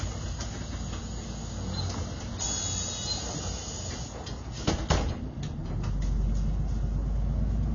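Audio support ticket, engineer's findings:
Likely AAC compression, fitting a low-bitrate AAC-LC stream around 24 kbps. Spectrum cut off above 6.9 kHz throughout, leaving the sound dull and smeared with plainly audible codec damage.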